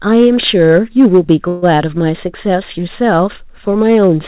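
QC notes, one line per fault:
Throughout: hard clipping. The level is driven about 3 dB past what the signal path can pass, so a small fraction of samples, around one in fifty, hit the ceiling and are cut flat. Those squared-off peaks add harmonics far up the spectrum, heard as a brittle crackle on the louder syllables rather than a continuous fuzz. Because the call path stops at 4 kHz, consistent with G.711 mu-law, the added harmonics sit within that limited band.
1.48–1.65 s: call audio freeze. For about 0.17 s the sound stops progressing. The last fragment is stretched into a fading buzz that does not drop to silence, lasting roughly 140 ms. Afterwards the speech picks up exactly where it stopped, with nothing skipped, so the freeze is an inserted gap that pushes everything later by the same amount. The likely cause is late-arriving packets letting the jitter buffer run empty, with the receiver filling the wait until delivery resumed.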